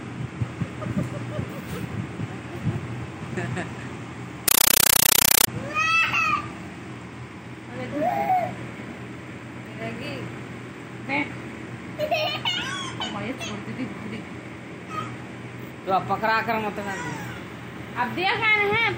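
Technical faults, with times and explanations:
4.48–5.47 s, compressed stream played as audio: loud chattering static in 8 ms bursts 31 times a second, which fits undecoded AC-3 frames being played as samples.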